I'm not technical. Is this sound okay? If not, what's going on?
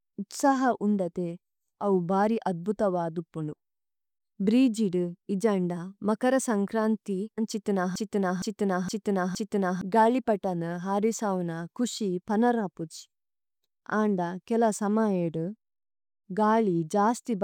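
No. From 7.96 to 9.81 s the speech sticks in a broken-record loop, repeating one 0.46-second snippet four times, likely from a stalled player or stream.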